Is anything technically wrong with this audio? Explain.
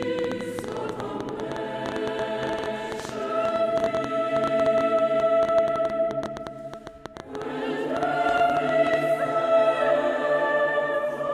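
Yes. From 0.03 s to 8.95 s a train of clicks runs over the audio, around a hundred of them at about 9.3 per second, spaced unevenly and peaking roughly 10 dB above the signal. The cause is likely interference or a faulty connection injecting near-identical pulses. It is heard as ticking that continues through pauses. Unlike scattered vinyl-style crackle, the clicks share one shape, then stop together.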